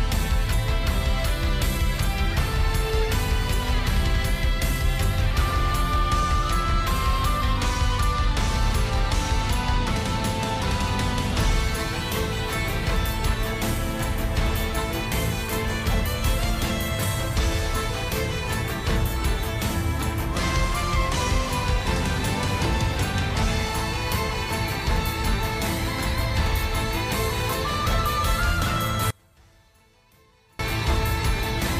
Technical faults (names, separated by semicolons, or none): one channel inverted